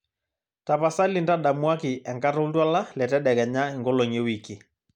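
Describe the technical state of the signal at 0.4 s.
The signal is intact at 0.4 s, with no audible fault at that point in the speech.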